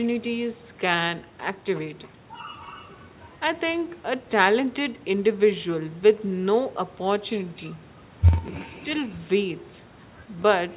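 Throughout the speech there is echo with no canceller. The far end's loudspeaker leaks into its microphone, and nothing subtracts the return, so each phrase comes back about a third of a second later, about 25 dB down. Unlike room reverberation, it is a distinct, separated copy rather than a smooth decaying tail. The echo shares the call's narrow band, which stops at 4 kHz, as a G.711 telephone path would.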